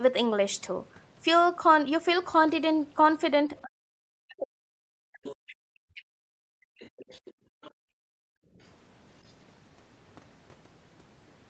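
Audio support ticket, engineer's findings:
Speech suppressed in double talk, 3.49–6.12 s: talker's level dips hard in pieces, roughly 2 s affected in total, deepest cuts near 40 dB. Likely cause: echo canceller misreading double talk and attenuating both. Waveform shows notched, collapsing envelope.

Other side's voice leaking through at 5.25–5.55 s, 6.78–7.32 s, 7.62–7.70 s and 9.27–9.33 s: a second voice around 15 dB under the talker at first, then near 25 dB under, with a faint trace at 9.3 s. Likely residual echo the canceller missed. Spectrogram shows weak harmonic stacks that don't track the talker's pitch.

Background gated by the echo canceller, 6.40–6.78 s and 7.32–8.59 s: room tone drops away, about 40 dB at deepest, then returns. Canceller clamping the mic while the loudspeaker plays. Waveform noise floor goes flat. Spectrogram floor blanks out across the whole 8 kHz band, which is consistent with Opus wideband.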